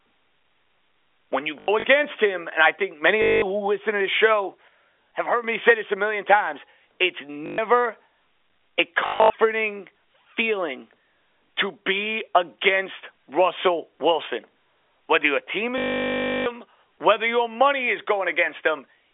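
Between 1.6 and 1.84 s, just before "him and I think", scattered drops of up to 80 ms each are filled by packet loss with last packet repeated. The receiver replays the previous fragment, giving a robotic stutter buzzing near 50 Hz, which fits 20 ms packets. The same stutter returns at 3.22 to 3.42 s (about 200 ms). From 4.68 to 5.44 s, between "listen to this show" and "me say this a", a sudden gain jump drops voice and background together by about 6 dB, likely an unramped digital gain step. Unlike a dropout, nothing is missing and nothing repeats. The buzzy repeats return at 7.46 to 7.58 s and 9.06 to 9.3 s. The longest, 680 ms, runs from 15.78 to 16.46 s, between "your team" and "whether your money is". The narrow telephone band of the G.711 coding can be heard throughout.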